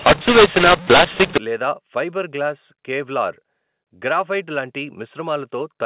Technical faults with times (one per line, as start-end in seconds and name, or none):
0.00-1.38 mu-law and A-law mixed up